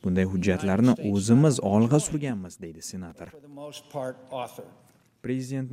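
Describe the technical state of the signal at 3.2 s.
At 3.2 s there's a processor overload crackle from 3.1 to 3.41 s: the processor repeatedly misses its deadlines, and tiny silent gaps, fitting buffers of a millisecond or two, tear the sound into grit.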